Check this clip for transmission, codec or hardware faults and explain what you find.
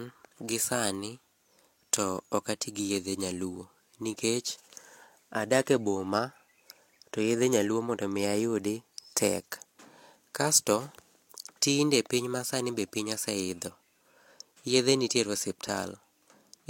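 Nothing here points to a transmission, codec or hardware problem; the speech comes across steady and intact all the way.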